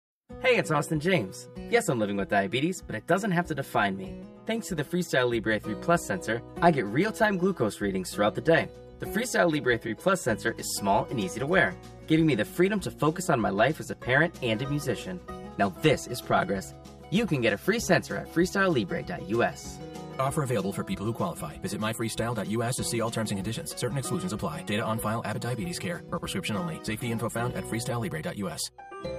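From start to finish, channel delay causes comb filtering. One channel lags the other by around 5 ms, so summing to mono cancels shared content at evenly spaced frequencies beginning near 100 Hz. The sound is hollow and phasey, with fixed spectral notches.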